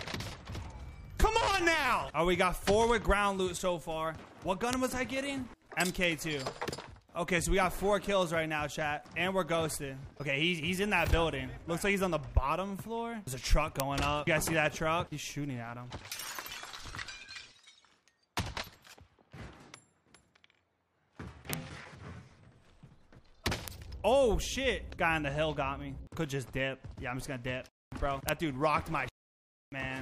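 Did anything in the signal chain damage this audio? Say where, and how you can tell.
Yes. There are five bit error spikes, at 4.73, 13.80, 21.53, 23.68 and 28.29 s. Each is a single sharp tick, broadband and unrelated to the surrounding sound. The spikes peak at about -3 dBFS or about -9 dBFS. The one at 4.73 s spans three samples; the rest span one. The damage is in the digital path, in memory, storage or a digital link. A flipped bit throws a sample's value off by a power of two, and the next sample returns to normal.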